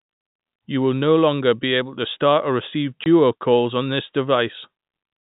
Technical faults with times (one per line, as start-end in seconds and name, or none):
3.04-3.06 packet loss filled with silence